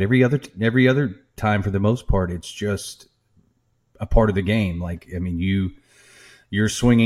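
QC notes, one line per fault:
No faults heard anywhere in the speech.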